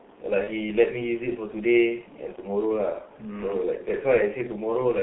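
From the start, the speech carries heavy G.723.1 codec damage. The band is confined to roughly 150 Hz to 3.5 kHz, so the voice sounds muffled and boxy, and the coarse, slowly updated vocal model at a very low bitrate, consistent with about 6.3 kbit/s, leaves a hoarse, rough texture. Consonants smear together because the codec tracks the voice only in long frames.

From 0.44 to 0.49 s there is VoIP packet loss concealed by the speech codec. The decoder bridges the gap by repeating its last pitch and filter settings at falling gain, so the sound is briefly stretched into a buzzy tone or coloured noise that fades. The length of the gap fits a single lost 30 ms frame. Because the decoder's state has drifted, the voice stays weak or distorted for a short time afterwards.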